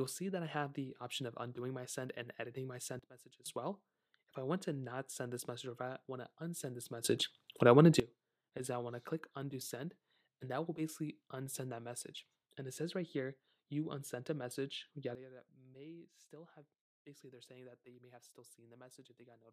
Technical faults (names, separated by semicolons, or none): sudden gain jump